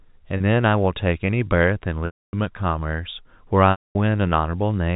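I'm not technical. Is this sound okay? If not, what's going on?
No. There's packet loss with pitch repetition: small chunks of the speech never arrived, and the receiver filled each gap by repeating the last sliver of voice. At 0.37 to 0.40 s it's a brief buzzy hold; at 2.06 to 2.33 s and 3.71 to 3.95 s it fades to silence.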